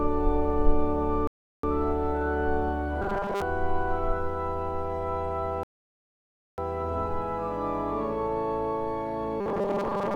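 At 1.27 s there's a rebuffering stall: the player ran dry and the sound drops to silence until 1.64 s, adding about 0.36 s, then picks up exactly where it left off. From 3.02 to 3.42 s you get robotic sound from repeated short buffers, a rigid 200 Hz metallic buzz, likely from the last 5 ms chunk being looped while most of the real audio gets skipped. A second, longer stall runs 5.63 to 6.58 s, adding about 0.95 s, and the same 200 Hz buzz comes back from 9.41 s to the end.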